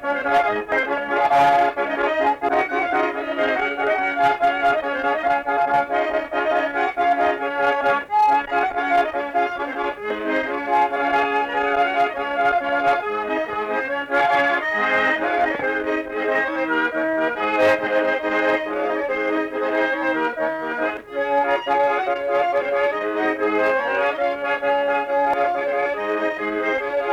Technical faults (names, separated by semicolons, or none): damaged data in a compressed stream